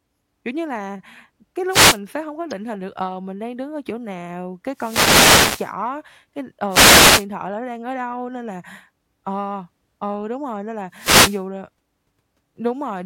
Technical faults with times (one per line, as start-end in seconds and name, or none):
1.68-1.99 wireless microphone noise hit
2.51 corrupt frame decoded
4.74-5.73 wireless microphone noise hit
6.69-7.26 wireless microphone noise hit
10.92-11.43 wireless microphone noise hit